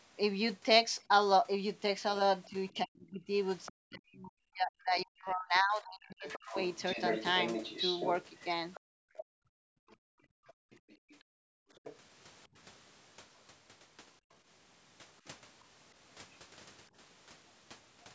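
From 2.45 to 2.78 s a faint second voice sits well below the talker, roughly 30 dB down. This is the other side's voice leaking through, likely far-end sound from the loudspeaker that the echo canceller failed to strip from the microphone.

Almost immediately, from 2.47 to 6.55 s, the talker's speech repeatedly sinks and breaks up, at its deepest by around 40 dB, for about three seconds in total. This is speech suppressed in double talk. With both sides talking, the canceller likely could not tell the talker from the echo and turned everything down.

From 6.29 to 9.24 s the leaking voice returns much louder, nearly level with the talker.

Inside that stretch, from 8.80 to 9.16 s, the room sound drops away by about 37 dB and then comes back. This is background gated by the echo canceller, which clamped the microphone while the loudspeaker was active.

A brief dip in the talker's speech at 9.45 to 9.50 s, roughly 30 dB deep, is another short double-talk suppression.

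From 9.78 to 11.72 s the background is gated again, by about 37 dB, for around one and a half seconds. During much of the same span, from 9.93 to 11.96 s, the far-end voice bleeds through about 20 dB below the talker. Throughout, the call microphone's band limit leaves nothing above 8 kHz.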